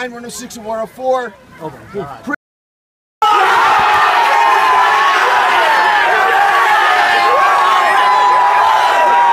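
The input was likely lost between 2.35 s and 3.22 s, through a disconnect, a failed link or a stray mute, while recording continued. This audio dropout to silence cuts the sound off mid-flow, leaves 0.87 s with no room tone, then resumes abruptly.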